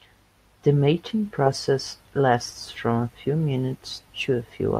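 No audible faults anywhere in the recording; nothing needs attention.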